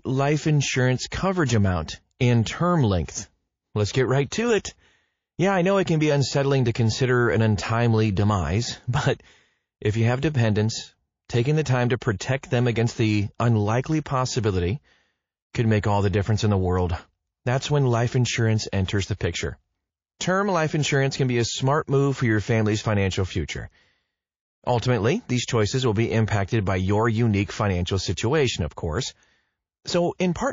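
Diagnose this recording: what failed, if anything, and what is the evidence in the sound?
The codec stage is where this went wrong. The whole recording has that watery, swirly quality, with sibilants chirping and smearing, and the damage is plainly audible. That is most likely MP3 compression at a low bitrate; it sounds like something around 32 kbps. At that rate the encoder runs out of bits and lets weak frequency lines blink on and off between frames.

There is also pre-echo, which comes from the same codec. Right after "life insurance" there is a short hiss from 1.46 to 1.49 s, about 29 ms long and about 16 dB above the floor. Just after "amount and term" it happens again, 3.05 to 3.08 s, 33 ms at about 16 dB, and once more at 19.17 to 19.21 s, 33 ms at about 18 dB. The encoder appears to stay on long blocks, roughly 72 ms, so noise meant for the attack spills ahead of it.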